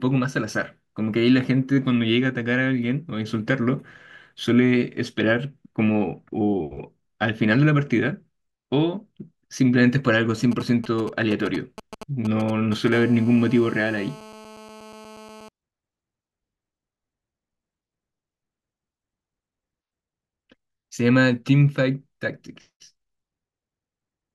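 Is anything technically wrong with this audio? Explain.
Yes, a nearby 2G mobile phone is getting into the audio circuitry, in two stages.

GSM signalling bursts, 10.52 to 12.89 s: While the phone exchanged control traffic with the network, it emitted short clusters of radio bursts repeating at 216.7 Hz. Something in the audio chain demodulated those pulses, turning radio energy into audible signal. Over the speech this produces a galloping dit-dit-dit of brief 217 Hz buzzes, sitting roughly 15 dB below the speech level.

GSM phone buzz, 12.92 to 15.49 s: The phone then moved into an active call and transmitted continuously in bursts at 216.7 Hz, which the audio circuit again rectified. The result is a steady, hard, raspy buzz at 217 Hz with a dense stack of harmonics, unrelated to the speech, at about 21 dB below it.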